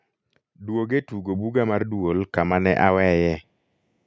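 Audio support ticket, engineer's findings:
Automatic gain rising, 0.59–2.66 s: speech and background noise swell together by about 9 dB over roughly two seconds. Capture-path AGC judged the input too quiet and ramped its gain up. Waveform: envelope and noise floor climb together. Spectrogram: whole band brightens, capped at 8 kHz by call mic processing.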